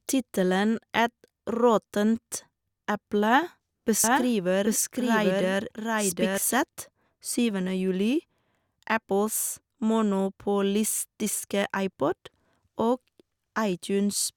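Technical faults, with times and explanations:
4.04 to 6.38 s, doubled audio track: a slower second capture path or an out-of-step edit likely mixes the speech in twice. A dry, full-band copy at about the original's level trails by roughly 0.7 s, starting and stopping abruptly.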